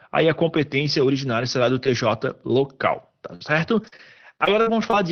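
From 3.35 to 4.95 s the speech breaks into repeated packet loss, giving a robotic sound: eight short holes, the longest 57 ms, each patched by stretching the previous sound, so about 15% is concealed. Unlike a single dropout, the gaps recur in quick succession.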